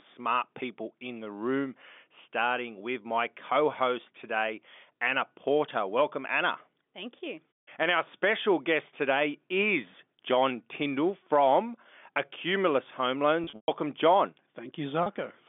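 At 13.44 to 13.68 s, packet loss with pitch repetition: about 180 ms lost across 240 ms, longest gap 120 ms, so held buzzy tones fade toward silence. At 15.03 to 15.06 s, a 30 ms loss briefly freezes the narrowband G.711 telephone sound.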